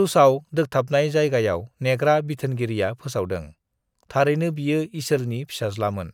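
No technical faults can be heard anywhere in the recording.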